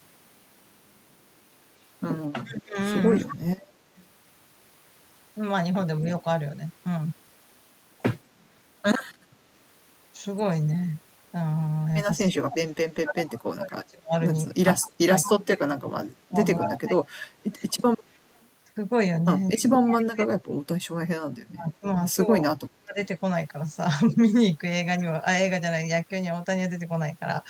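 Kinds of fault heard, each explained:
Speech suppressed in double talk: when both ends talk at once, the echo canceller likely mistakes this voice for loudspeaker echo and turns both down. Here the speech sags by as much as about 35 dB in long stretches near 2.4 to 3.6 s, 12.3 to 17.6 s and 19.5 to 23 s, with a slight dip around 6 s.
Echo leak: the far end likely plays the call on a loudspeaker, and its echo canceller lets part of the microphone pickup through, sending a delayed copy back. A faint repeat trails the speech by 227 ms, from about 15 dB to about 30 dB below the direct sound, at 3.28 to 4.05 s, 17.7 to 18.45 s, 19.48 to 20.04 s and briefly at 24.1 s. Its fixed lag sets it apart from room reverberation, which smears rather than repeats.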